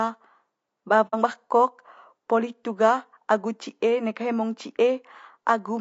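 Throughout the speech the sound is rough and grainy, with a hiss sitting between the pitch harmonics and a top band that sounds thin and somewhat synthetic. This is likely low-delay AAC compression (AAC-ELD) at a low bitrate, the damage plainly audible and consistent with around 32 kbps. Its very short frames blur the harmonic structure of the voice. Unlike a band-limiting filter, it leaves the high end present but artificial rather than simply dull.

From 1.07 to 1.15 s the speech fades out and back in, leaving a soft-edged hole. This is AAC frame loss with muting, and its length fits two lost frames. The decoder zeroed the missing spectrum, and the overlapping windows smoothed the edges. That smoothing sets it apart from a hard dropout or buffer underrun, which would cut off abruptly and often click.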